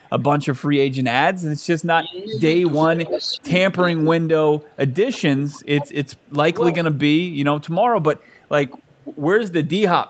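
A speech recording with two faults. The first is echo leak: a copy of the voice returns 369 ms late, most likely because a far-end loudspeaker's echo canceller let some of its microphone pickup through. It is very faint, roughly 40 dB down, at 0.01–0.23 s, 6.21–6.29 s and 7.65–8.96 s, but nearly as loud as the speech itself at 3.03–3.37 s. On a spectrogram it shows as a fainter duplicate of the harmonic striations, shifted right by about a third of a second. The second fault is speech suppressed in double talk between 1.99 and 7.37 s. The level repeatedly dips and cuts out in pieces, totalling around three seconds, with the deepest drops roughly 30 dB. The likely cause is an echo canceller that, with both sides talking at once, attenuated the near talker along with the echo. The waveform shows sudden notches in the envelope, and the spectrogram shows gaps or thinned upper bands. Energy stops at 8 kHz throughout, consistent with the call's microphone processing and a wideband Opus path.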